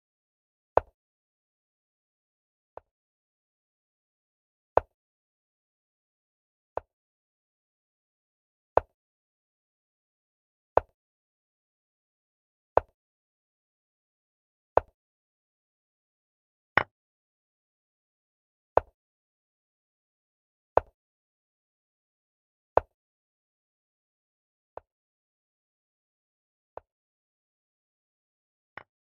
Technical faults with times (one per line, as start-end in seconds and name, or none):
2.15-3.63 sudden gain jump
6.77-7.81 sudden gain jump
24.44-29.10 sudden gain jump